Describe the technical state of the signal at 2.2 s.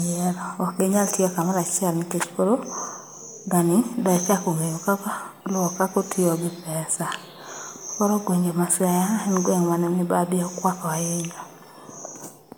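At 2.2 s the speech sounds swirly, smeared and hollow, with consonant attacks blurred, and this holds for the whole clip, not just that moment. The likely cause is generation loss: the audio appears to have been through MP3 coding several times, around seven, at what sounds like 128 kbit/s. Each pass quantised it again on a shifted frame grid, so noise and spectral holes built up. Nothing is present above 20 kHz.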